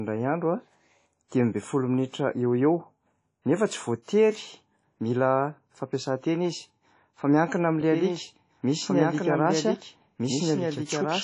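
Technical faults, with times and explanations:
Throughout: WMA compression is the likely cause of the plainly audible damage. Nothing sounds above 10.1 kHz, and the speech rings and washes with hiss that breathes with the signal, which fits a low bitrate around 32 kbps. A plain low-pass filter would leave no such pumping noise.
7.81 s to end: A doubled audio track begins abruptly. A full-band second copy of the speech runs about 1.5 s behind, around 5 dB quieter, likely from a second capture path or a misaligned edit. Unlike an echo, it has no decay and no room colour.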